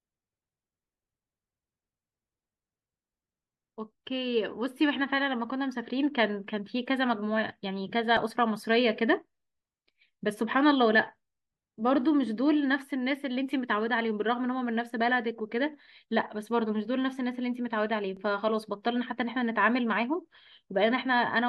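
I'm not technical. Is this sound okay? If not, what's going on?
No. At 8.17 and 18.17 seconds there's a tiny skip where an overlap between stream segments occurs. The audio arrives in two-second chunks, and at these joins a few milliseconds were trimmed away. Unlike a dropout, nothing goes silent; the sound skips ahead slightly.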